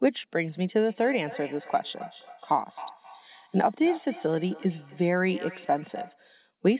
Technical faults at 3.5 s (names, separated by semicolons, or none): feedback echo between two devices